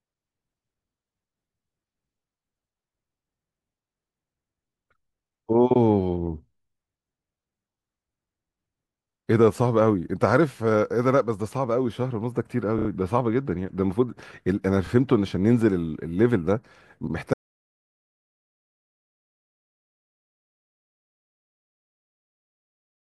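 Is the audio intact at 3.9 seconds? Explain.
Yes, the speech at 3.9 seconds plays through intact, with no dropout, click, distortion or other audible fault at that moment.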